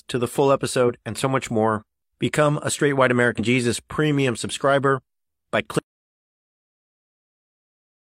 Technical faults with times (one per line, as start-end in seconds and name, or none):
0.84-0.90 damaged data in a compressed stream
3.35-3.40 damaged data in a compressed stream
5.79-8.05 audio dropout to silence